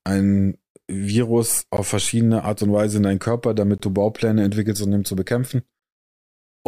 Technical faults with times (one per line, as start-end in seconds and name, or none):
1.77 gap between stream segments
3.78 gap between stream segments
5.79-5.82 gap between stream segments